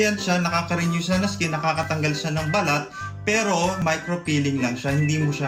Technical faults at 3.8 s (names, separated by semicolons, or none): overlap between stream segments